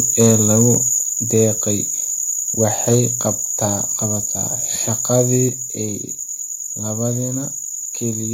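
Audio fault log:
0.2–0.75 s, 1.34–1.45 s, 2.62–3.0 s and 5.14–5.22 s, microphone overload: the loudest speech peaks get their tops flattened, giving a harsh, crackly edge. The first burst is the worst, pushing about 6 dB past full scale with a few percent of samples squared off. The later ones run about 2, 3 and 1 dB over, with the clipped share shrinking to well under one percent. That's likely input gain set too hot, driving the converter into its ceiling.
1.02 s and 5.49 s, microphone volume stepped down: the whole level, speech and background together, suddenly drops in a single step, by about 4 dB the first time and about 5 dB the second. There's no fade; it just lands lower. That's likely the call software catching the distorted peaks just before and cutting the device's input gain in one move to stop the clipping.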